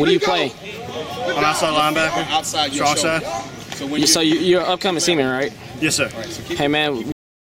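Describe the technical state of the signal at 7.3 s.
At 7.3 s there is only digital silence: the sound is chopped off mid-event at 7.12 s and never decays. This is a cut-off end, where the final buffers were never written or played, so the signal stays dead from 7.12 s to the end.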